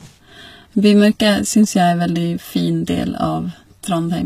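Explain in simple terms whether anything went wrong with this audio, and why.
Yes, something's off throughout. The top end sounds fake, with s sounds coming out gritty, a bit lispy and metallic, and nothing at all above about 14.9 kHz. That's likely HE-AAC compression, which rebuilds the treble by copying lower sound upward.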